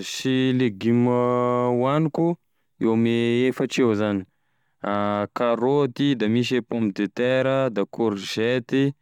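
Nothing in the recording stood out as a technical fault on listening.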